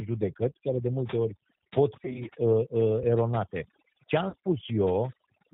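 Across the whole speech clip the background falls to near silence, broken by twinkling, chirpy specks, and the softer parts of the voice are hollowed out. That is overdone noise removal: the noise reducer was set so hard that any frequency band close to its noise estimate was pushed down or shut off, taking the quiet detail of the speech along with the hiss.

Throughout, the voice also has a rough, slightly synthetic grain, and there is no brightness above about 4 kHz. That points to the G.729 codec, which fits an 8 kbit/s G.729A stream. Instead of carrying the waveform itself, it rebuilds speech from a vocal tract filter, a pitch predictor and a few pulses per frame, so the damage here is plainly audible.

From 2.05 to 2.23 s, just after "de multe ori pot", the voice briefly turns buzzy and smeared, then weak, in several short stutters rather than one gap. This is VoIP packet loss concealed by the speech codec. 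The sound fits several scattered losses of 20 ms or less, spread over roughly 100 ms. After each loss the decoder extended its last pitch and filter at falling gain, and the speech took a moment to recover.

At 4.29 to 4.35 s the same kind of concealment returns as a short buzzy, fading stretch of about 60 ms, which fits roughly 40 ms of lost packets.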